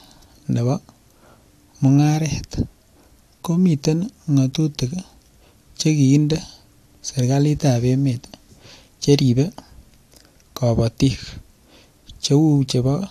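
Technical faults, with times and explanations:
No technical faults can be heard anywhere in the speech signal.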